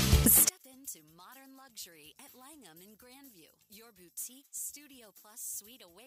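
One channel inverted, from 0.49 s to the end: when the stereo sound is folded to mono, the level drops by about 29 dB and what remains is faint, with the centre and low end nearly gone. The likely cause is one side having its polarity reversed, so everything the two channels share cancels in the sum, leaving only the small difference between left and right as a residue.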